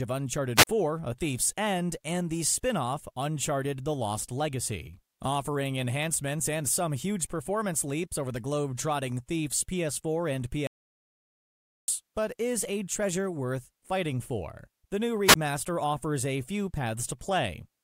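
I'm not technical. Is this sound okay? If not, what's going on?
No. Two kinds of fault can be heard.

The first is a wireless microphone squelch dropout, at 0.56 to 0.67 s and again at 15.28 to 15.35 s, just before "offers a few". The radio signal weakened and the receiver muted itself. You hear a burst of hiss, then a tiny hole of silence, about 36 ms and 16 ms long.

The second is an audio dropout to silence, from 10.67 to 11.88 s, just before "but is a treasure". For 1.2 seconds the sound vanishes completely, with no background left. The likely cause is a lost connection, and whatever was said there is gone.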